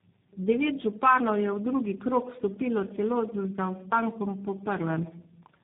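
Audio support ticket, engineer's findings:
Tandem speech coding throughout: rough, muffled, warbly speech, nothing above 3.7 kHz. Sounds like three low-rate speech codecs in a row, likely AMR-NB, G.726 and a final G.729A, each re-encoding the previous one's damage, so the artefacts stack up.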